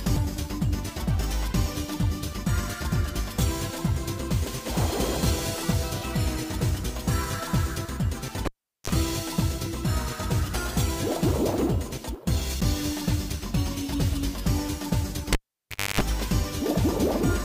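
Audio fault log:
0.16 s: damaged data in a compressed stream. Right at the start, a stretch of the encoded bitstream is corrupt. The decoder cannot parse the frame there, loses its lock on the frame structure and has to hunt for the next valid header. The garbled frame comes out as a brief chirp or blip rather than the intended audio, and sound resumes once the decoder resynchronises.
8.45–8.90 s and 15.33–16.01 s: cable pulled and plugged in. Twice, a live connector is pulled out and pushed back in. Breaking the contact gives a pop, then the signal drops to near silence for about 0.40 s the first time and 0.63 s the second. While only the tip touches, the open ground picks up 50 Hz mains buzz. That buzz lasts about 33 ms in the first event and about 274 ms in the second. A second pop follows as full contact restores the sound.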